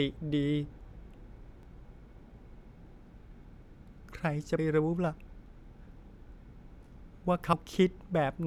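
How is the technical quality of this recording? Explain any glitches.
The recording has one recurring glitch: audio missing between chunks, three times, at 1.63 s, 4.58 s and 7.53 s. The system likely captures or processes the speech in blocks about 3 s long and drops roughly 50 ms each time it closes one block and opens the next. The two sides are butted together with no gap, so the speech jumps forward abruptly, a brief skip that recurs at that steady spacing.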